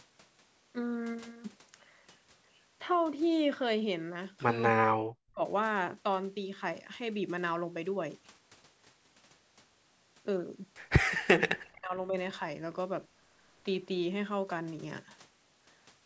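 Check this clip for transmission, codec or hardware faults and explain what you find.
Two faults stand out, both of one kind: speech suppressed in double talk. From 4.72 to 5.42 s the speech drops sharply, falling by roughly 40 dB for about 0.7 s. From 11.09 to 12.15 s it drops again by a similar depth for about a second. The likely cause is an echo canceller facing both ends talking at once. It could not tell this talker from the loudspeaker echo, so it turned everything down. The speech sinks almost to silence, then returns. The call's microphone processing leaves nothing above 8 kHz.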